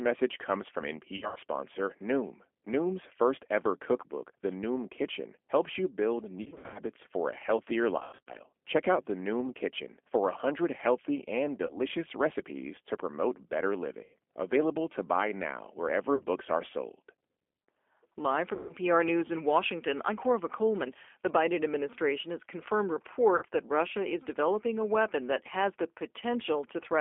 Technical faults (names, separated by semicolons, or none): G.729 codec; VoIP packet loss concealed by the speech codec